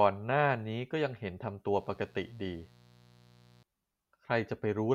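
A speech recording with a stretch of mains buzz from 1.76 s to 3.63 s. It sits roughly 30 dB below the speech: a steady, raspy drone built on 60 Hz. Sharp switching spikes, twice per mains cycle, from something like a dimmer, a rectifier or an unshielded cable, leak into the signal and stack up harmonics reaching several kHz. That gritty upper edge separates it from plain hum, which would stay a smooth, low tone.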